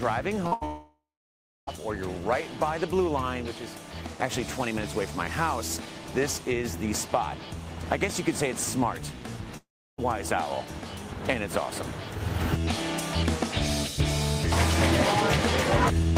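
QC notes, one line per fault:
0.47–0.53 s, short concealed packet loss: about 40 ms of audio never got through, and the receiver papered over the hole by carrying the preceding sound forward, then crossfading back into the real signal. You hear it as a quick smear or wobble rather than a clean cut, because what fills the gap is a stretched copy of the sound before it.
0.53–0.63 s, burst of packet loss: right on the heels of that, roughly 80 ms goes missing in one run. The receiver keeps extending the last sound and pulls the level down as it goes, so there's a short held buzz or fading hiss. When the audio picks up again it's already further along, and the stretch in between is simply gone.
0.65–1.69 s and 9.57–10.00 s, long network dropout: in both, the last sound is drawn out into a fading buzz or hiss and then the signal goes dead. The first gap lasts about a second, with roughly 0.66 s of near silence after the fade. 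The second lasts about 0.42 s, with around 0.33 s of silence. Audio resumes further on each time, with that whole chunk lost. That's likely the network delivering nothing for those spans.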